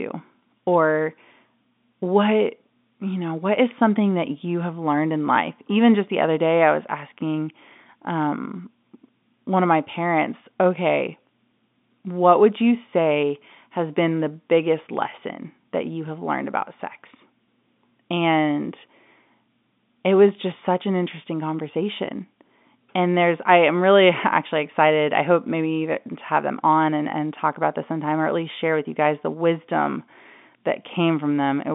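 Telephone-band speech with no audible technical faults.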